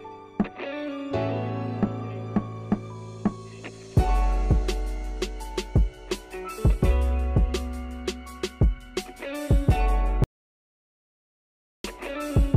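At 10.24 s the audio drops out to silence and stays there until 11.84 s, a gap of about 1.6 s. The cut is abrupt at both ends: the sound stops mid-flow and resumes mid-flow, and the gap is silent with no room tone underneath. The likely cause is lost input, such as a disconnected device or a momentary mute, while recording carried on writing zeros. Whatever occurred during that stretch is not recoverable.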